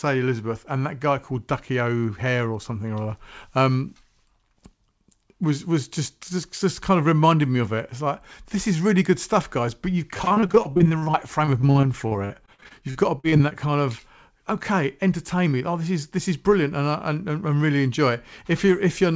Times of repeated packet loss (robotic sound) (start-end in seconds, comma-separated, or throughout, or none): 10.14-13.53